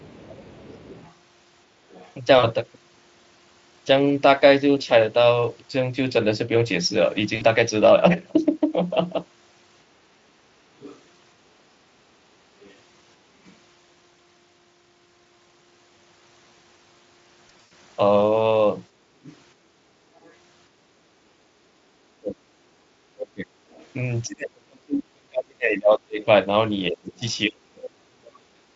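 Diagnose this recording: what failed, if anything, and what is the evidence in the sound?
Call processing lets the other side's voice leak through, faint and well under the talker, at 0.0–2.12 s, 10.8–10.99 s, 12.61–13.51 s, 19.24–20.33 s and 23.71–23.86 s. This is a second voice layered under the talker rather than distortion of the talker's own voice. That separates it from codec or network damage and points to loudspeaker pickup that the echo canceller likely failed to remove completely.

Network-stage VoIP packet loss, concealed by the speech codec, appears at 2.39–2.47 s (40 ms), 7.35–7.44 s (60 ms) and 17.47–17.71 s. The last event spreads 140 ms of loss over 240 ms, with a longest gap of 100 ms. In each case the sound smears into a fading buzzy or coloured tone and stays weak briefly afterwards. The 40 ms and 60 ms gaps fit whole 20 ms frames. The effect is decoder extrapolation from a stale state, so it is not a simple level drop.

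The call-processing stage suppresses the talker's speech during double talk at 10.05–10.35 s, with a deep drop. It does so again from 21.23 s to the end, where roughly five seconds are pulled down by up to about 40 dB. In those stretches the talker's voice ducks and breaks up while the far end is active. The likely cause is the echo canceller failing to separate local speech from echo and attenuating both. Unlike packet loss, the sound is simply turned down and is not stretched into a tone.

The echo canceller also gates the background at 18.9–19.84 s. The room sound sinks by about 6 dB for roughly 0.7 s while the loudspeaker plays and recovers when the canceller releases. This is a shallow dip in the room tone itself, not a cut in speech, and that distinguishes it from double-talk suppression. The Speex codec shows at most faint coding damage, which fits a high-rate setting.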